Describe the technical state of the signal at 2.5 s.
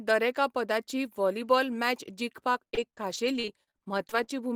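At 2.5 s, repeated packet loss begins (2.53 to 4.30 s). Missing chunks are patched by repeating prior sound, giving choppy, robotic speech; spectrograms show smeared, repeated stripes between brief gaps.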